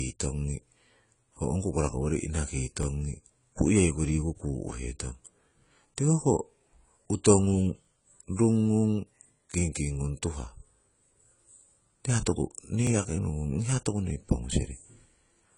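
Speech with plainly audible AAC compression damage throughout: nothing above 10 kHz, and a dull, smeared quality with warbling on sustained sounds and fizz on sibilants, which fits a likely AAC-LC encode at about 24 kbps. The warble and fizz separate it from a simple low-pass filter, which would dull the sound but leave it clean. Overlapping chunks cause three brief stutters at 2.83, 7.85 and 12.87 s, the last just before "yaki nohungung hiya toku". At each join, 20 ms of audio plays twice. The 5-second spacing points to processing in 5 s chunks that each start slightly before the last ended. Because a piece is repeated rather than missing, these differ from dropouts.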